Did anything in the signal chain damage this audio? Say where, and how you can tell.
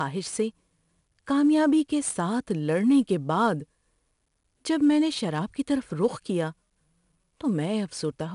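Yes. Gritty, level-following hiss coats the speech throughout, roughening sharp attacks, with nothing above 10.6 kHz. This points to the codec stage: 4-bit ADPCM compression, whose coarse adaptive steps track loudness and fit an 88 kbps stream.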